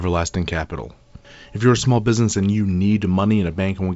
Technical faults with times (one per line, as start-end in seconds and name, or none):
none